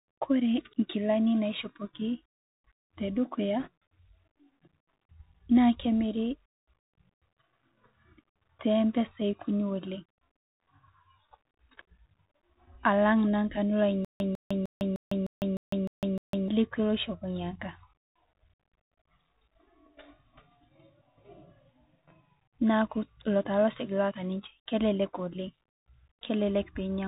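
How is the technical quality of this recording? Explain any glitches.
Quality's pretty rough: it sounds like a Bluetooth headset call, with a couple of clear glitches on top.

Throughout, the Bluetooth CVSD headset codec is plainly audible: nothing above 4 kHz, scratchy s sounds and a grainy hiss, which fits the 64 kbps one-bit-per-sample delta scheme.

From 3.60 to 3.68 s there are bit errors on the Bluetooth voice link, at a couple of percent. Flipped bits add a short rushing crackle rather than loud clicks.

From 14.05 to 16.48 s, just before "lekwe oshopo", there's a stutter with silent gaps. A 150 ms fragment repeats eight times, each followed by about 154 ms of dead silence, every 305 ms. That's likely a stalled stream replaying its last buffer, so the audio from that stretch is lost.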